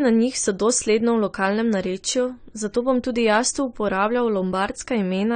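From start to finish the speech sounds dull and smeared, with nothing above about 9 kHz, so the top end just isn't there. That's the signature of AAC compression, likely AAC-LC at a low rate, with the damage plainly audible, which fits something around 32 kbps. At that budget the encoder quantises coarsely against its hearing model and drops the high band entirely to save bits, and that's what gives the muffled, mushy texture.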